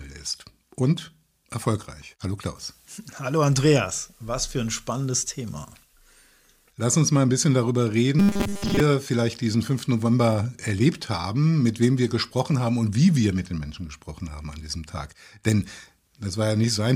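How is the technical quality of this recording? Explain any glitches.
There is one glitch. From 8.19 to 8.80 s the sound turns into a rigid, metallic buzz pitched at 200 Hz: robotic sound from repeated short buffers. Likely, audio arrived too slowly, so roughly 5 ms chunks were looped over most of that stretch, imposing the fixed buzz.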